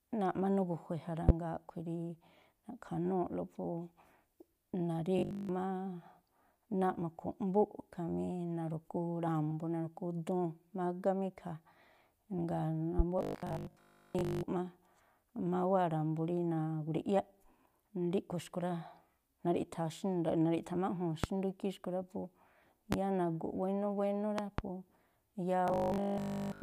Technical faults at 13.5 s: robotic sound from repeated short buffers

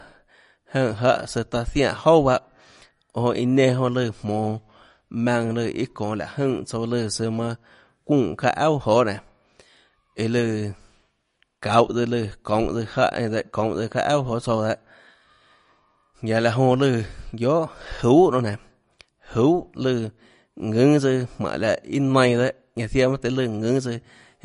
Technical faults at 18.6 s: MP3 compression

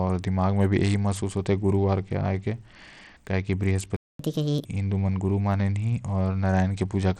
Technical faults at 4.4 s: Bluetooth SBC compression; catch-up at higher speed

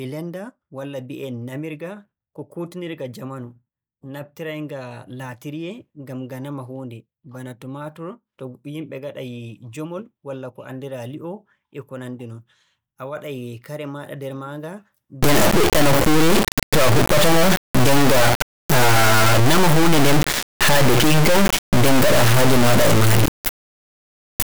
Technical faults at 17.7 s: integer read as float

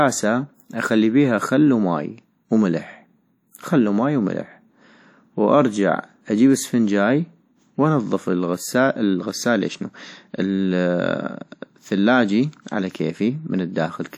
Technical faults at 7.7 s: WMA compression

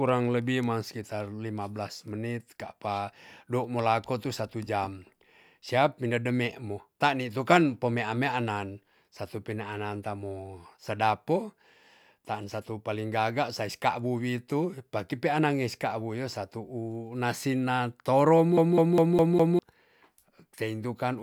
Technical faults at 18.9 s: CD stuck on one turn

